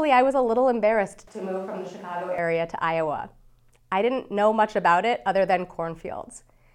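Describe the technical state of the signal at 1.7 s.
The speech at 1.7 s falls inside a switch to a distant microphone, running from 1.27 to 2.38 s. The close microphone's feed has likely dropped out, leaving a pickup further from the talker. The voice turns hollow and roomy, loses bass, drops about 5 dB, and room noise rises to roughly 25 dB below the speech. Unlike added reverb or a low-cut filter, the level, noise floor and tone all change together, abruptly, at both edges.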